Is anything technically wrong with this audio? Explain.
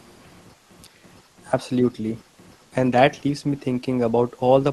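Yes. From 2.59 to 2.64 s a very faint, brief scrap of the speech returns about 393 ms after the original. This is an echo leak, likely from a far-end loudspeaker whose echo canceller let some residue back into its microphone. The long fixed delay and the brief fragment set it apart from room reverberation, which would trail smoothly from the original. The Opus call path's band-limited top end, extending to about 12 kHz, is audible beneath it.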